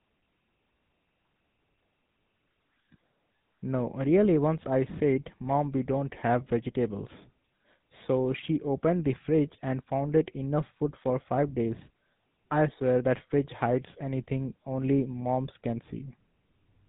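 Speech runs through the GSM full-rate codec for the whole clip, and the damage is plainly audible as a buzzy, gravelly roughness. The coder models the vocal tract and excites it with evenly spaced pulses, keeping only a third of the excitation, at a rate that fits 13 kbps. On a spectrogram, energy stops at 4 kHz with nothing above, and the harmonics look smeared and grainy rather than clean.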